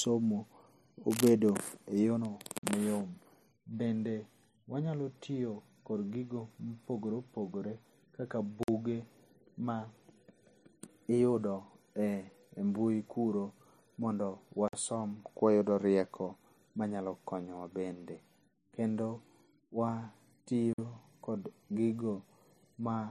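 Right at 1.1 to 1.3 s there's a burst of cable scratch noise, a rough, uneven rustle sitting only a few dB under the speech. It's likely a worn cable or connector getting moved, with its contact resistance jumping around for that instant.

Then there's a gap between chunks at 2.58, 8.63 (after "mopogore opogore kaka"), 14.68 (after "mbui kuro mondo") and 20.73 s. Each is a 50 ms hole, 6.05 s apart, so the audio was split into 6 s chunks with silence inserted at every join.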